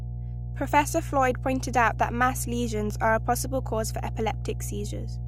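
Mains hum runs through the whole clip, from the first moment to the last. It is a steady low tone at 60 Hz, sitting under the speech without a break. The level is high, only a little below the speech itself. Power-line current has leaked into the signal path. A ground loop or a nearby transformer is the kind of coupling that does this. The hum never changes, so it is heard even between phrases.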